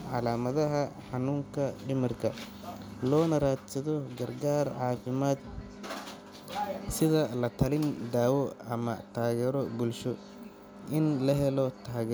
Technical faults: none

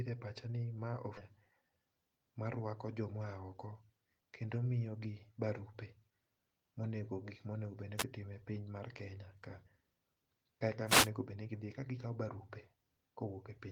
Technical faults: skip ahead; jitter buffer speed-up; wireless microphone noise hit

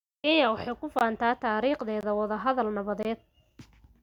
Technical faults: gap between chunks

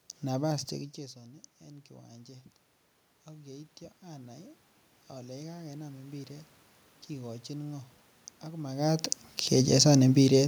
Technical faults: automatic gain rising

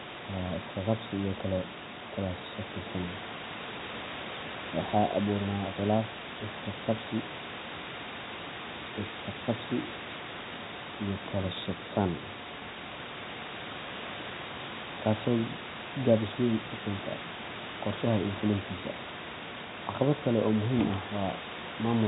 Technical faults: none

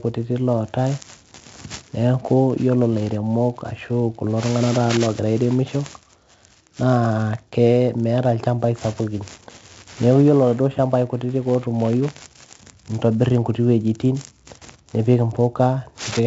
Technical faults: 4-bit ADPCM compression

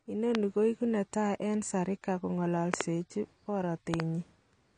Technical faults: AAC compression; loud pop

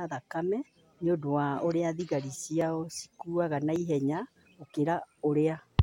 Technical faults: dropped buffer (overrun)

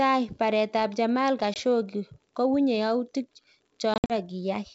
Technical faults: packet loss on an ADPCM call

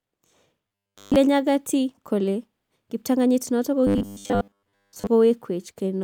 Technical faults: robotic sound from repeated short buffers

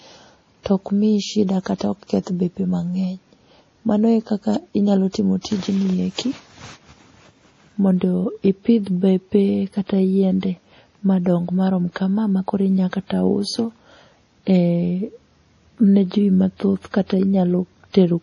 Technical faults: MP3 compression; pre-echo

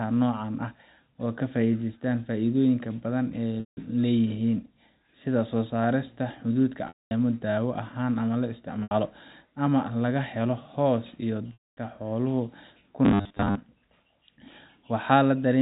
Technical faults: packet loss with pitch repetition; robotic sound from repeated short buffers

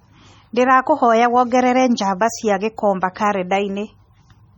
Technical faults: MP3 compression

